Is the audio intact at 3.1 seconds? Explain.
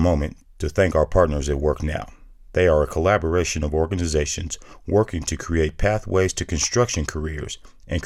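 Yes, the speech at 3.1 seconds is intact, with no dropout, click, distortion or other fault at that moment.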